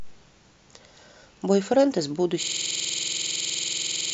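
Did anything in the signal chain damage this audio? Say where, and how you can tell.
Yes. A system hang loop at the driver or buffer stage starts at 2.43 s and runs to the end. The same 46.4 ms slice, which fits a 2048-sample ring buffer, repeats at 21.5 Hz as a machine-gun stutter. The waveform shows identical repeated blocks, and the spectrogram shows evenly spaced vertical stripes.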